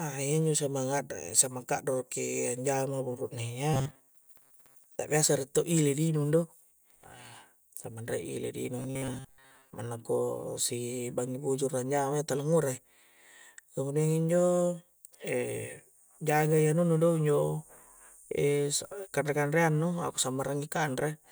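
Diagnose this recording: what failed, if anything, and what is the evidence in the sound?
Robotic sound from repeated short buffers at 3.74–4.99 s (after "ka'doroki anjama buru'ne ya") and 8.79–9.76 s (after "re' ile' di"). The speech becomes a rigid 133 Hz buzz, matching a 7.5 ms chunk looped while most real audio is skipped, likely a driver or buffer underrun.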